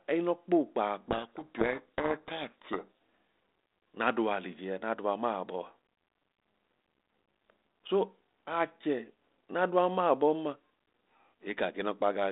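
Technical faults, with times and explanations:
1.08 to 2.85 s, codec payload misread: the G.726 code words arrive in the wrong bit order, so the decoder turns the speech into harsh, buried distortion until the two ends agree again.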